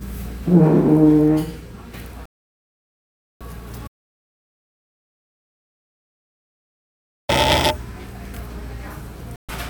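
Everyday sound recording with two kinds of fault. A digital broadcast dropout mutes the audio from 2.26 to 3.41 s and again from 9.36 to 9.49 s, losing 1.15 s and 0.13 s. Both gaps fit whole 32 ms frames being discarded until valid data returned. Between 3.88 and 7.29 s an audio dropout to silence leaves 3.41 s of silence with no room tone, likely from the input feed being lost while recording continued.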